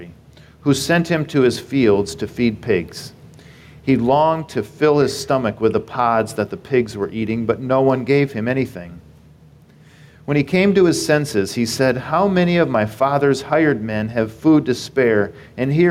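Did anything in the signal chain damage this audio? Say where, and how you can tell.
Yes: gain pumping throughout, with the level ducking around 5 dB under loud sounds, likely from excessive preamp gain driving a fast limiter.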